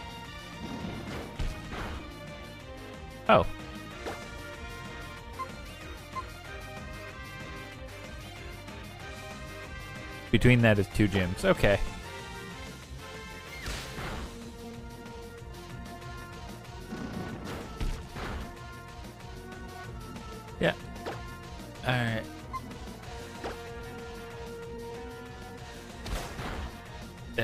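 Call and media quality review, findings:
Nothing stood out on listening that would warrant a finding against this clip.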